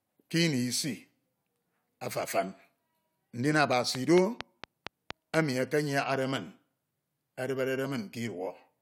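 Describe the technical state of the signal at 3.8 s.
A steady ticking sits over the speech from 3.73 to 5.35 s: a train of clicks, about seven alike pops at a regular 4.3 per second, peaking well above the speech level. Likely cause: interference or a faulty connection injecting repeated pulses.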